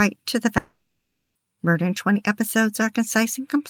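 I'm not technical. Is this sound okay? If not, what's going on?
No. From 0.57 to 1.37 s the speech cuts out: the last sound smears into a fading buzz, then about half a second of silence, and speech resumes with that stretch missing. This is likely a long network dropout, where incoming audio stopped arriving for a moment.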